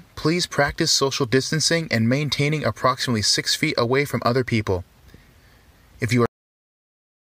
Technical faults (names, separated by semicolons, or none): cut-off end